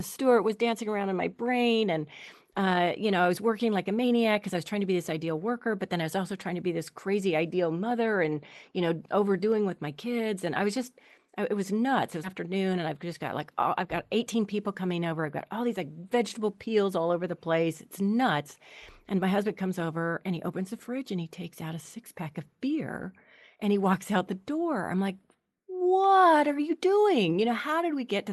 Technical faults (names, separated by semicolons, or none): skip ahead; jitter buffer speed-up